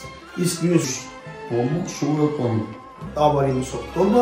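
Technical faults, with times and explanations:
0.84–3.07 s, section at the wrong speed: for about 2.2 seconds the sound runs at roughly 0.78 times its proper rate, so it drags and its pitch drops by around four semitones, darker and heavier than the audio on either side. Because speed and pitch shift together and snap back at the boundaries, this points to a likely clock or sample-rate mismatch during editing or playback rather than deliberate pitch processing.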